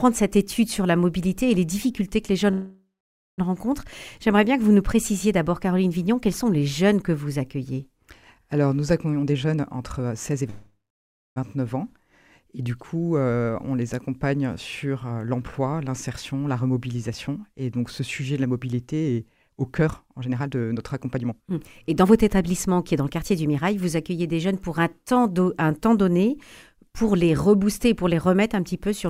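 Twice the audio stalls: from 2.51 to 3.40 s the last sound stretches into a fading buzz or hiss that drops to silence for about 540 ms, and from 10.50 to 11.38 s the same happens with about 610 ms of silence. Each time the sound then picks up exactly where it stopped, with nothing lost, only about 0.86 s of delay added. This is likely a call audio freeze, where delayed packets left the jitter buffer empty and the receiver kept extending the last sound until they arrived. The clip also rushes at two points while the pitch stays unchanged. From 9.12 to 10.49 s it runs at 135% speed, and from 15.04 to 23.55 s it runs at 115%. This is jitter buffer speed-up. The receiver held more audio than it aims for, so it repeatedly cut out tiny pitch-period-sized slices to catch up, removing roughly half a second in the first stretch and about a second and a half in the second.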